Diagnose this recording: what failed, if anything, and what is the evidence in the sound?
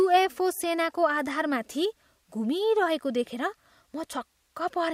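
Nothing failed: no stage from capture through playback leaves an audible mark anywhere in the speech.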